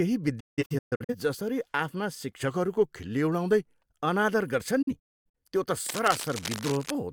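From 0.40 to 1.15 s the speech breaks up in a digital broadcast dropout. The receiver muted after failed frames, losing about 0.43 s in several holes over 0.68 s, the longest 0.17 s, each faded in 8 ms. The waveform shows flat gaps, and the spectrogram shows blank vertical bands, before the speech returns with "जसरी आफ्ना".

After those words, from 2.48 to 3.79 s, the speech slows by 5.5% and drops 98 cents, almost a semitone, then snaps back. This is likely a drift correction step. A clock-matching resampler changed rate at once, so every harmonic in the spectrogram steps down together.

A second dropout runs from 4.82 to 5.35 s, losing about 0.34 s over 0.51 s, with a longest silent run of 0.26 s. It appears as the same flat, blank gaps.

From 5.86 to 6.92 s, uneven scratching sits at about 10 dB below the speech. The likely cause is cable scratch noise from a worn connector or control whose contact resistance is fluctuating. 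On a spectrogram it shows as dense, irregular broadband specks, and on the waveform as jagged bursts riding on the signal.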